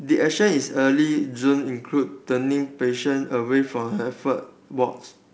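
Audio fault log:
No faults are heard in this speech clip. It carries the bandwidth of G.722 wideband telephone coding, reaching up to about 7 kHz with at most a faint hiss in the upper band, which fits the codec's full 64 kbit/s mode.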